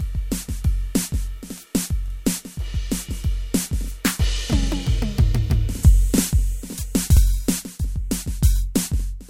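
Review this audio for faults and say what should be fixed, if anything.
Overlapping chunks at 7.17 to 7.21 s: the music stutters briefly as a 44 ms slice plays twice in a row. The audio was handled in blocks about 2.5 s long, and at this join the next block began before the previous one had finished, so the overlapping 44 ms is heard twice. The repeat is heard as a hiccup in the music. To prevent it, make each chunk start exactly where the last one ended, or trim any overlap before joining.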